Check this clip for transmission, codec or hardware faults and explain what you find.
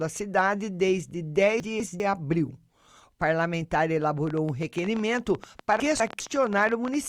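Two kinds of fault are audible in the speech: two stretches where the audio is played out of order, and a long train of clicks overlapping the second of them.

Chunks out of order, 1.6 to 2.0 s and again 5.8 to 6.2 s: each time the speech jumbles briefly, as if a fragment has been stuck in the wrong place. In each stretch a 200 ms chunk arrived or was written one chunk late and plays after the chunk that should follow it. Nothing is missing, but the swap leaves three hard joins where the waveform jumps.

Train of clicks, 4.27 to 6.95 s: a ticking or popping runs over the speech and through its pauses, around forty clicks at an uneven spacing averaging 13.1 per second, peaking a little above the level of the speech itself. The pulses are much alike in shape, which likely points to interference from nearby equipment or a faulty connection or power supply injecting the same spike repeatedly.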